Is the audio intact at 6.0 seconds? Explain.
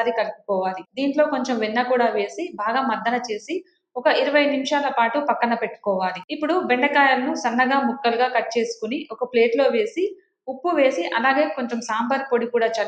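Yes, at 6.0 seconds the audio is intact, with no dropout, click, distortion or other fault to be heard there.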